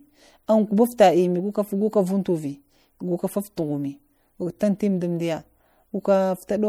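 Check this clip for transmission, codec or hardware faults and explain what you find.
One codec fault runs through the whole speech recording. It sounds like MP3 compression at a low bitrate, which is the likely cause. The damage is plainly audible from start to end. Quiet parts of the spectrum flicker in and out between frames, which gives a watery, swirling texture. S sounds turn metallic and chirpy. Consonant onsets blur. That degree of loss fits a bitrate around 64 kbps.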